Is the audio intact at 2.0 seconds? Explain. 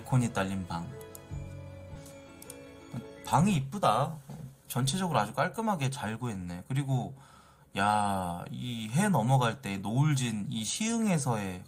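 No. At 1.95 s a skip ahead drops roughly a second of audio. Later audio was already waiting, so that stretch was discarded. Playback jumps straight forward with no gap. The sound on either side is joined almost directly.

From 2.05 to 3.41 s a jitter buffer speed-up follows. The buffer held too much audio, so short pitch-period pieces were cut out repeatedly, around 150 ms in total. The sound plays at 112% speed at unchanged pitch and feels hurried.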